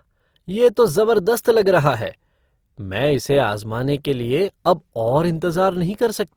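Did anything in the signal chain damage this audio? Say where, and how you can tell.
Yes, at the codec stage, throughout the speech, with Opus compression the likely cause. Tones sound rough and grainy where starved bands are refilled with folded or noise-like energy. The spectrogram stays densely filled, with few holes, up to about 20.4 kHz, which fits fullband CELT near 24 kbps.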